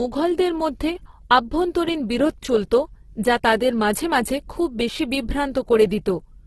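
Right from the start and all the way through, the speech has a grainy, rough texture with nothing above 12.2 kHz, most likely Opus compression in its music mode at a very low rate, around 12 kbps. Starved bands get refilled with folded or noisy content, so the sound turns hissy and coarse.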